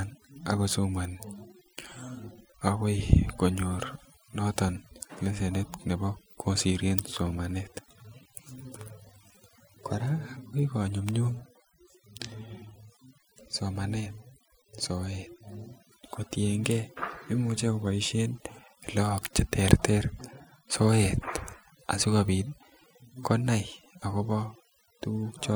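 Overdone noise removal runs throughout: bands near the noise estimate are cut hard, taking quiet speech detail too, leaving a lowered, twinkling background.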